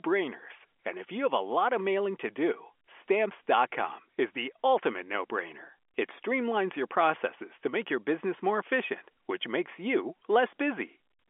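Nothing stood out on listening to this telephone-band speech recording.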